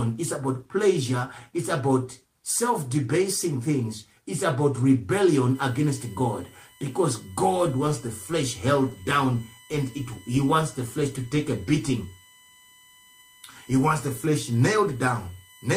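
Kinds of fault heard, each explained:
USB whine: from 5.55 s to the end of the clip a steady tone sits under the sound, built on 1 kHz with its strongest component at 3 kHz, roughly 30 dB below the signal. The bus draws current in 1 ms frames, and that periodic load couples in through the shared power or ground, so the whine locks to 1 kHz and its multiples. Mains hum differs: it sits far lower, at 50 or 60 Hz and its harmonics, and would not land on these exact kilohertz values.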